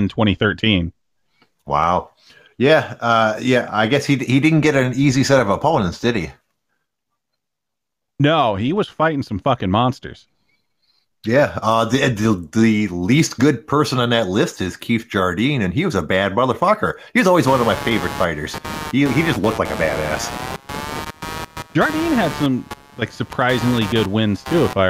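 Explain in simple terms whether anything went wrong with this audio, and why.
From about 17.5 s to the end at 24.9 s, a fairly loud buzzing chirp, pulsing roughly 150 times a second, sits under the speech. This is computer activity noise: the computer's changing workload disturbs the audio circuit's shared ground. Unlike steady mains hum, it flickers with the machine's activity, not with the speech.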